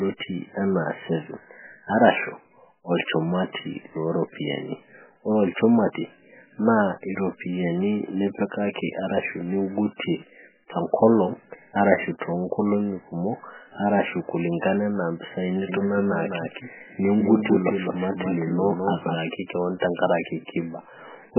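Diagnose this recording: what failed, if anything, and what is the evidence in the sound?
The codec stage failed. Throughout, the speech is heavily damaged and watery, with swirling artefacts as weak frequency lines drop in and out between frames. Nothing remains above 3 kHz. The likely cause is MP3 compression at a very low bitrate, around 8 kbps.

A doubled audio track runs from 15.69 to 19.15 s. A full-band copy trails the speech by about a fifth of a second, about 5 dB quieter. It starts and stops abruptly, without decay. The likely cause is a second, slower capture path or an edit holding two out-of-step copies.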